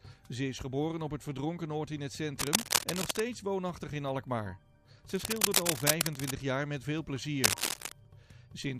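Cable scratch noise appears from 2.39 to 3.20 s, again from 5.09 to 6.31 s, and briefly from 7.43 to 7.93 s. Each time, dense, irregular bursts of crackle and rustle sit over the audio, roughly 5 dB louder than the sound itself, so the scratching dominates while it lasts. The likely cause is a worn cable, connector or control being moved, its contact resistance jumping erratically and injecting noise.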